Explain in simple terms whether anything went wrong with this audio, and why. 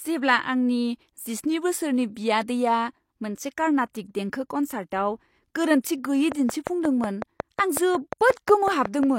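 From 6.32 s to 9.04 s a train of clicks runs over the speech: about fifteen identical ticks, evenly spaced at roughly five and a half per second. Their steady rhythm, continuing through pauses, sets them apart from random crackle, likely from electrical interference or a loose connection.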